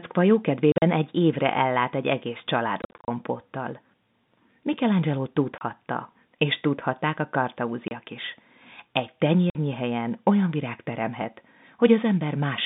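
Packet loss filled with silence cuts the speech at 0.72–0.82 s, 2.82–3.08 s, 5.58–5.61 s, 7.88–7.91 s and 9.5–9.55 s. Lost packets became silent holes with hard edges. Gaps in 10 ms steps point to 10 ms packets. The narrow telephone band stays steady throughout.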